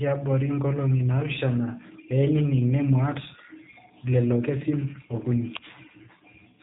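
The whole clip carries G.729 codec damage, plainly audible. Nothing above 3.8 kHz survives. The speech is rebuilt from a vocal tract model and a few pulses per frame, so it sounds rough and slightly synthetic. This fits an 8 kbit/s G.729A stream.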